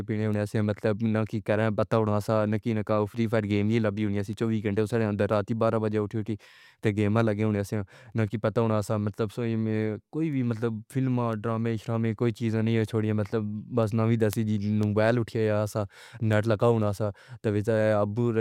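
Word clock ticks run through the speech from 0.34 s to 18.33 s, a steady train of sharp clicks roughly every half second, about forty in all, some louder than others. The receiving device is running on its own clock instead of locking to the digital link's sender, and the two differ by a few tens of parts per million. Each time they slip past each other, a single sample is dropped or repeated, leaving a brief discontinuity that sounds as a tick.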